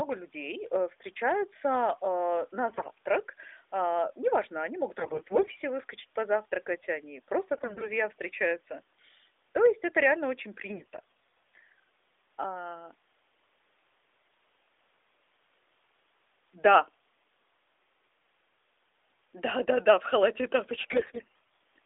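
AMR bit errors occur at 2.70–2.92 s, 4.98–5.59 s (between "неважно они могут" and "выскочить позавтракать они"), 7.54–7.90 s, 10.68–11.68 s and 20.82–21.58 s (after "да в халате и"). The speech is carried by the narrowband AMR codec, band-limited to about 300 Hz–3.6 kHz. In these stretches, the weakly protected bits of each frame arrive corrupted, so the excitation pulses land in the wrong places and the fine gain and spectral values are skewed. Pitch and level survive, but the voice turns hoarse, scratchy and gargly. The damage is lightest at 10.68 s and harshest in the final burst.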